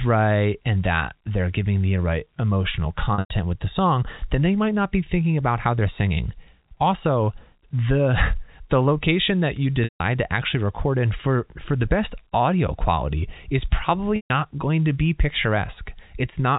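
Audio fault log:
3.14–3.30 s, 9.84–10.00 s and 14.16–14.30 s, packet loss with pitch repetition: about 140, 160 and 140 ms of audio go missing, which fits runs of 20 ms packets. The first gap is scattered over 160 ms, with its longest stretch 100 ms. The receiver fills each hole by looping the last pitch period and fading it, so the sound briefly holds a buzzy, static tone before the speech cross-fades back in over the 4 kHz-limited G.711 band.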